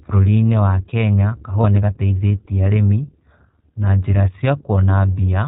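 From the start, the speech carries the sound of the iLBC codec. It is a narrowband VoIP coder, so nothing above 4 kHz survives. The voice is muffled at the top end. The damage is plainly audible as a rough, slightly synthetic grain. Each 20 ms frame is coded on its own, without help from the frame before. The character fits iLBC's 15.2 kbps mode.

From 1.62 to 1.66 s there are lost iLBC frames. The decoder had nothing to play, so it repeated the last pitch cycle and mixed in noise. The result is a brief held, buzzy vowel sound. The gap is about 20 ms, which fits a single lost frame. Because iLBC frames stand alone, the voice recovers cleanly right after.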